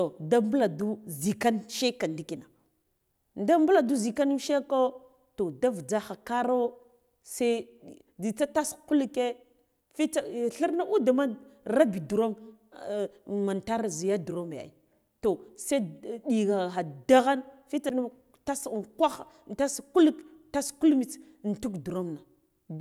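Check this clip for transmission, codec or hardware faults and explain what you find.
One fault turns up in this speech clip: a CD skip at 17.89 s, just after "daghan fitsa". It sounds like a brief tick and a split-second silence, then the speech resumes from another point. A knock or disc flaw threw the laser onto a different turn of the spiral.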